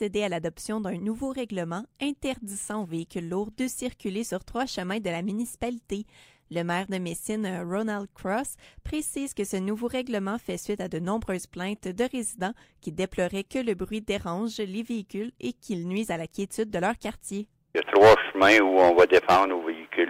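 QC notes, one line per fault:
No faults found.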